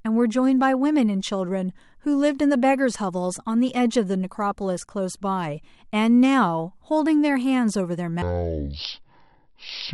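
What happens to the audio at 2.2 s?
Nothing goes wrong at 2.2 s; the audio runs through that moment intact, with no dropout, click, glitch or other fault.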